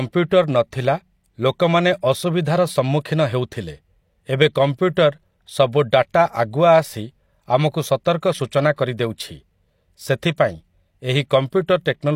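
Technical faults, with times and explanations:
10.37 s, pre-echo: a brief hiss arrives just ahead of a sharp attack in the speech, roughly 15 ms early, so the onset sounds softened and smeared rather than crisp. The codec's block spread its quantisation noise, sized for the loud attack, back into the quiet gap before it. On a spectrogram this appears as a broadband smear bleeding leftward from the onset; on the waveform, low-level noise precedes the transient.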